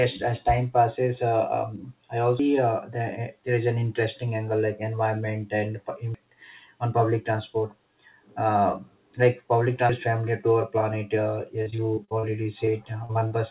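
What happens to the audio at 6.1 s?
At 6.14 s the audio skips forward. About a third of a second is missing, and the two sides are butted together with no silence between them. The likely cause is audio missing between chunks, lost while a 4-second chunk closed and the next opened.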